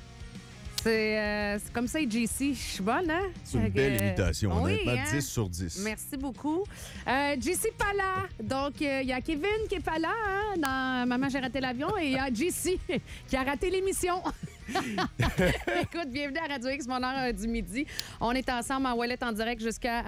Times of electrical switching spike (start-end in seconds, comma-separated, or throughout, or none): 0.78, 3.99, 10.65, 17.99